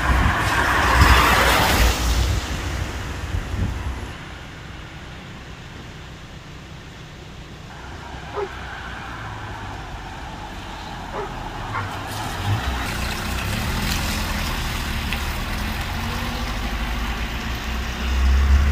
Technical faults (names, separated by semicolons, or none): none